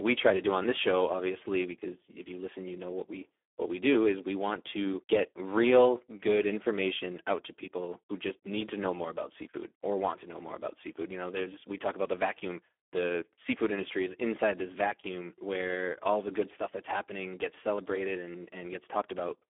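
From start to finish, the speech carries heavy Speex codec damage. The sound suggests a low setting near 8 kbps. Too few bits reach the excitation, so speech turns hoarse and noisy. The band sits near 300 Hz to 3.4 kHz, with nothing above 3.6 kHz.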